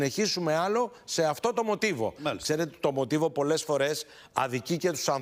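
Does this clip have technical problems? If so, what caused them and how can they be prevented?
No, nothing in this one sounds like a technical problem, so there's nothing to trace back or guard against.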